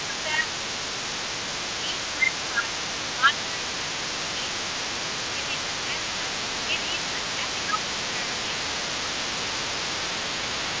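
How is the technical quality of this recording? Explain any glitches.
The recording has two audible problems, both typical of a speakerphone call: a second voice runs underneath the whole clip, and the main speech repeatedly sinks. It arrives over a call path with nothing above 8 kHz, which fits a G.722 wideband codec.

Throughout, from 0.0 to 10.8 s, a fainter second voice sits roughly 15 dB below the talker. This is the other side's voice leaking through: the far end plays on the talker's loudspeaker, and the echo canceller likely left part of it in the microphone signal.

The talker's speech dips by around 10 to 15 dB at 0.05 to 0.47 s, 1.81 to 4.71 s, 5.34 to 6.30 s, 6.67 to 9.60 s, and 10.22 to 10.72 s. This is speech suppressed in double talk. Both sides likely spoke at once, and the canceller, unable to separate near speech from echo, turned everything down.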